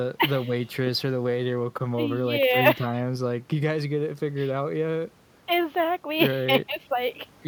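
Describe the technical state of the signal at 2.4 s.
At 2.4 s the speech signal is intact, with no audible technical fault at that moment.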